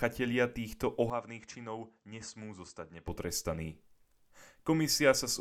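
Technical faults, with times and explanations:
1.10 to 3.08 s, input switched to a poorer device: the speech abruptly drops about 10 dB, loses everything above 8.2 kHz and gains a faint new noise floor, with no gap at the change, then clears again. This likely reflects the system moving to a narrower-band microphone and back.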